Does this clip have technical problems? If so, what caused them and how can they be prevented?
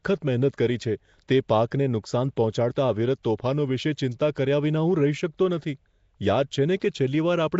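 Yes. Throughout the speech there is a rough, hissy halo around the sound and a smeared, underwater quality. This is likely Nellymoser compression, the old Flash microphone codec, at a rate that fits a 32 kbps stream. It codes short blocks with a fixed small bit budget. Weaker bands get no bits and are filled with noise. On a spectrogram, the upper bands show blotchy, noise-filled patches instead of clean harmonics. To prevent this, record or transmit with a modern codec such as Opus at an adequate bitrate, or keep an uncompressed original.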